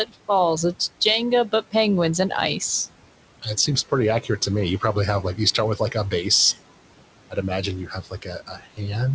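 Noise suppressor artifacts run through the whole clip. The suppressor pulls down whatever bands it judges to be steady noise by about 18 dB, frame by frame, so the room noise, which sits about 16 dB below the speech, sinks in the gaps and comes back under each phrase. That pumping residue sets it apart from a plain gate, which would cut cleanly on and off.

Speech cut by the noise suppressor appears three times. From 0.06 to 0.29 s, the opening sound drops by up to about 16 dB for roughly a tenth of a second. From 3.42 to 6.6 s, just after "and ice", scattered parts of the speech fade by up to about 15 dB, adding up to around 400 ms. From 7.3 s to the end, the drops reach about 17 dB. Here the speech itself is treated as noise and turned down, so it sounds swallowed rather than warbly. The call path's top end stops at 8 kHz, which fits a wideband codec such as G.722.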